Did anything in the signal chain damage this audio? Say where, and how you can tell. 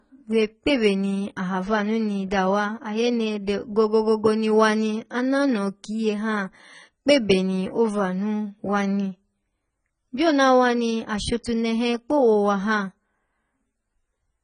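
Yes, at the codec stage. Throughout, the speech sounds dull and smeared, with a warbling, fizzy edge on sibilants and nothing above 9.5 kHz. This is likely heavy AAC compression: AAC-LC starved of bits, which fits a bitrate near 16 kbps, lowers its cut-off and leaves spectral holes.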